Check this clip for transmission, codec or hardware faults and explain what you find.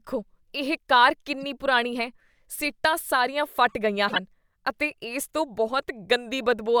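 The clip has two kinds of codec fault: damaged frames that were decoded anyway, and one spot where compressed frames were skipped.

At 1.41–1.44 s and again at 6.43–6.45 s there is a short chirpy squeak, peaking around -35 dBFS. This is a corrupt frame decoded: flipped bits gave wrong gains or codes, misplacing energy for roughly two frames and then one.

At 4.07–4.18 s the speech jumps forward slightly. Compressed frames were skipped, dropping roughly 20 ms of audio.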